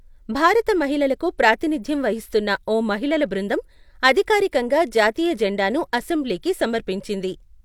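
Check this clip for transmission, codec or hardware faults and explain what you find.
Nothing to report here: the speech comes through without a single problem worth pointing out.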